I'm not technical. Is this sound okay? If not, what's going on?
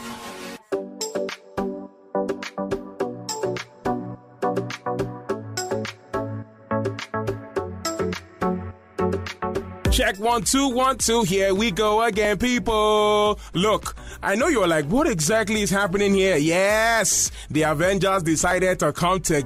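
No. Adaptive stream at a lower bitrate, from 2.18 to 4.18 s: for about two seconds the sound gets rougher, with more digital artefacts, then snaps back. The stream briefly switched to a lower-quality copy, probably to cope with a slower connection, without any gap.

Dropped buffer (overrun), at 11.07, 12.25 and 18.51 s: each is a spot where the sound jumps forward slightly, losing a tiny sliver, the longest at 12.25 s. The likely cause is the computer falling behind, so the sound card overwrote audio before it was saved.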